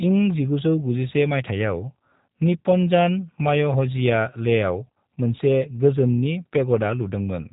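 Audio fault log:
Throughout, G.729 codec: the speech has passed through a low-rate speech coder that keeps only a vocal tract filter, a pitch predictor and a handful of pulses for each 5 ms half-frame, with the plainly audible roughness fitting G.729A at 8 kbit/s. Because the waveform is resynthesised from those parameters, the speech has a rough, slightly synthetic edge, and nothing survives above 3.8 kHz, leaving it narrow and dull.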